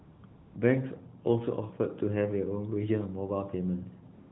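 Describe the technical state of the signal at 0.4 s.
At 0.4 s the signal is AMR comfort noise, spanning 0.26 to 0.56 s. The encoder has classed the input as silence and stopped sending speech frames for 300 ms, so the decoder fills the gap with smooth, steady synthetic noise in place of the real background.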